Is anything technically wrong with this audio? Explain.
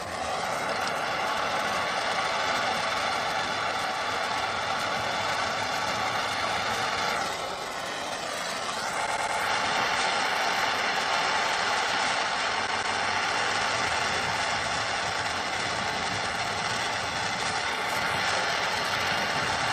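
Yes. Repeated frames: a compressed block was decoded again, so at 9.05–9.37 s a 104.5 ms chunk replays three extra times, and at 12.66–12.97 s a 156.7 ms chunk replays twice more. Each is heard as a stutter that adds 313.5 ms.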